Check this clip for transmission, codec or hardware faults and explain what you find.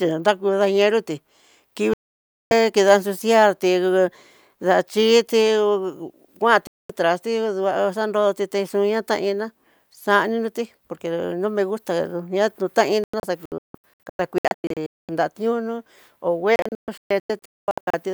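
The speech has four digital broadcast dropouts. The receiver lost good frames and muted until valid data returned. Whatever was sent during each mute is gone.

From 1.94 to 2.52 s the sound cuts to silence, returning on "kida suciarti".

From 6.67 to 6.90 s a shorter hole opens, ending at "traste duá xanroti texoña".

From 13.04 to 15.09 s the sound breaks into several short holes. They total about 1.1 s, none longer than 0.22 s.

From 16.56 to 17.94 s the same choppy pattern returns. About 0.86 s is missing, in gaps of up to 0.22 s.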